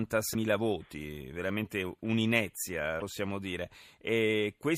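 A broken MP3 bit reservoir is the likely cause of two brief glitches in this speech, at 0.33 to 0.36 s and at 2.99 to 3.02 s. Each time the speech skips forward and a garbled blip, roughly one 26.1 ms frame long, replaces the sound. MP3 frames store part of their data in space left over in earlier frames. With frames missing, the next frame reaches back and decodes unrelated bytes instead.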